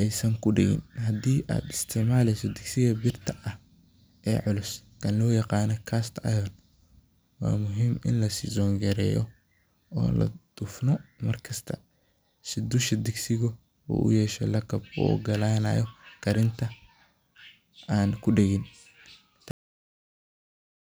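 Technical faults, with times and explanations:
19.51–20.90 s, cut-off end: the speech stops abruptly at 19.51 s, in the middle of a sound, and the remaining 1.4 s is flat digital silence. The final stretch of audio was never written or played out, so the sound is severed rather than finishing. On the waveform the trace drops from active signal straight to a flat silent line with no tapering decay; on a spectrogram the energy ends in a sharp vertical edge followed by blank black.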